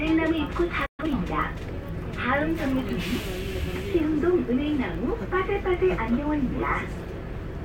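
At 0.86 s the sound drops out until 1.00 s, a playback stall lasting about 0.12 s, likely from the player running out of data; the waveform shows a flat gap and the spectrogram a blank vertical band. From 1.00 to 1.12 s comes a time-compressed catch-up: the sound runs at double speed, hurried but at normal pitch, and the spectrogram shows compressed detail with small splice seams.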